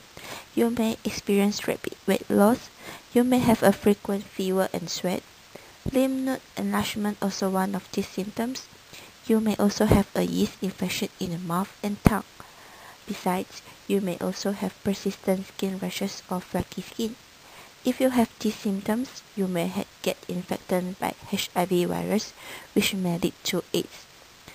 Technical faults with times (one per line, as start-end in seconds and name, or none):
none